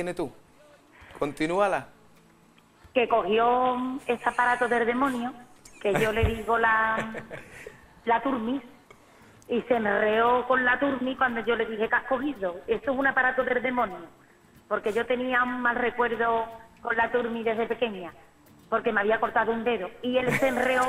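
No technical fault can be heard anywhere in this audio. Nothing in the sound calls for a timestamp or a cause.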